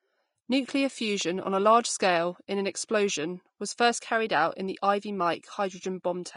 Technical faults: Vorbis compression

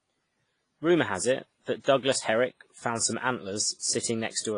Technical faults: WMA compression

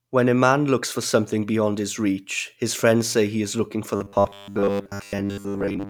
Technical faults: robotic sound from repeated short buffers

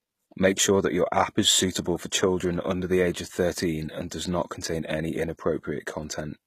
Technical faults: HE-AAC compression

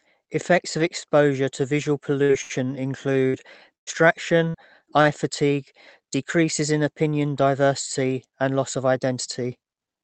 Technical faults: burst of packet loss; short stall from a late packet; jitter buffer slow-down; repeated packet loss (robotic sound); jitter buffer speed-up

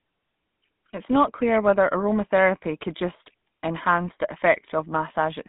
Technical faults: GSM full-rate codec

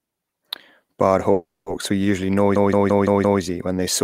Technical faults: call audio freeze; system hang loop

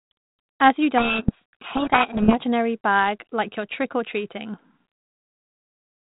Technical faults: codec payload misread

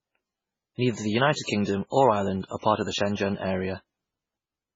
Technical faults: low-bitrate audio saved at a high bitrate

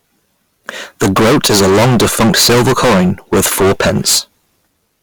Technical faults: hard clipping

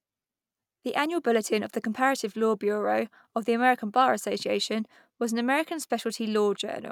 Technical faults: none

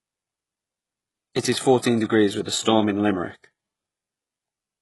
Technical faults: HE-AAC compression; pre-echo

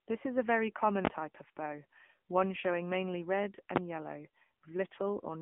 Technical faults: AMR narrowband mobile codec

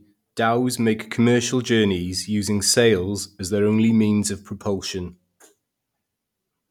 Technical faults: none

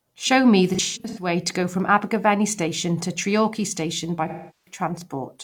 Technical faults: AAC frame loss with concealment

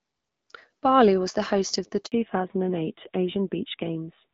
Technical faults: handover gap; fallback to narrowband

